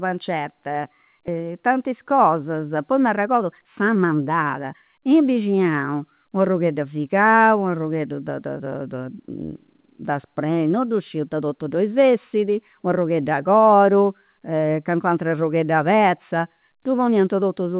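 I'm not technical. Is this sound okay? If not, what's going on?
No. At 1.28 to 1.3 s the speech suddenly jumps forward, losing roughly a second. This is a skip ahead: the receiving end dropped a chunk of delayed audio to catch up.

From 3.13 to 5.37 s the speech sounds hurried, running about 9% fast at normal pitch. This is a jitter buffer speed-up: tiny slices, about a fifth of a second in total, were trimmed to reduce lag. The phone-call sound, with nothing above 4 kHz, comes from the normal call path.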